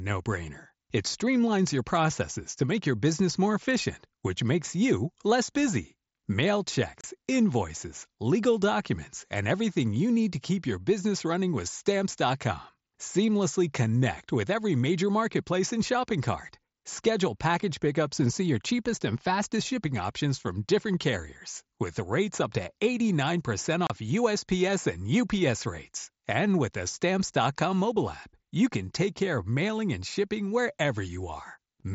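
Unconcealed Bluetooth headset packet loss cuts out the speech at 7.01 to 7.04 s and again at 23.87 to 23.90 s. Each time, about 30 ms of audio between headset and phone never arrived, which fits a short run of consecutive lost packets. Nothing was patched in, so silence or an idle pattern fills the gap. That leaves a brief hole with hard edges, heard through the mSBC headset codec's light graininess.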